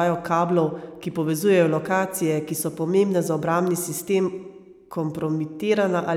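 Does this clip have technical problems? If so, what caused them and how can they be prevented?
No, there are no technical problems to report here.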